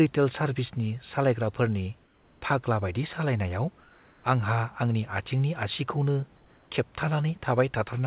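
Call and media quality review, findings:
Comfort noise in place of the background: room tone turns steady and featureless, about 2 to 3 dB quieter, at 2.04–2.42 s, 3.80–4.24 s and 6.36–6.70 s. Likely discontinuous transmission with receiver-side noise synthesis. Spectrogram: smooth, uniform noise band, still capped at 4 kHz.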